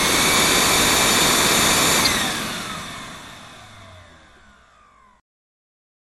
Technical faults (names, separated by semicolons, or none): MP3 compression; corrupt frame decoded